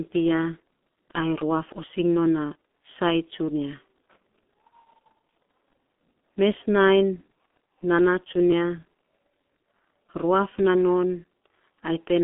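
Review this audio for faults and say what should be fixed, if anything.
G.723.1 codec damage runs through the whole speech clip: nothing sounds above 3.8 kHz, and the band sits roughly between 200 Hz and 3.5 kHz. The heavy hoarseness and smeared consonants come from coarse 30 ms frame modelling, consistent with a 6.3 kbit/s coder. Preventing it means routing the call through a wideband codec at a higher bitrate instead of this low-rate telephony path.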